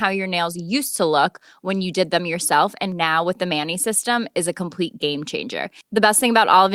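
No technical faults can be heard anywhere in the speech recording; the signal holds steady and continuous throughout.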